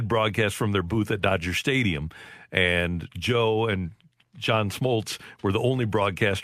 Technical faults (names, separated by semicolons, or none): none